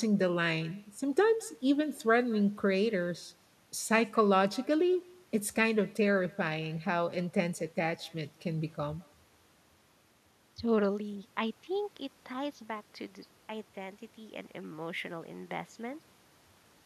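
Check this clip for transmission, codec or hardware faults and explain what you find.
One fault runs through the whole recording: echo with no canceller. The talker's speech is trailed, roughly 200 ms later, by a faint, thin copy about 28 dB below it. The far end's loudspeaker feeds its microphone, and nothing removes that return path.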